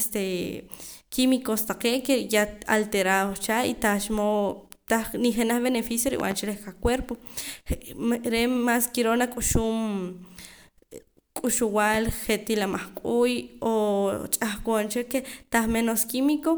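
A speech recording with two loud pop faults: a double pop at 6.20–6.34 s and a single one at 11.94–11.97 s, each roughly 10 dB above the speech. They appear as sharp waveform spikes and full-height broadband stripes on a spectrogram, likely from a voltage pulse such as a plug or static discharge.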